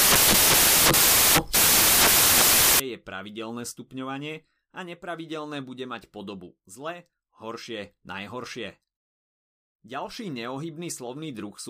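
From the start to 2.8 s, the speech is replaced by samples built from the wrong bytes. Each sample's bytes are combined in the wrong order or alignment, so the noisy low bits dominate, producing loud, harsh broadband noise until the speech returns clean with "je pravidelné stupňovanie a".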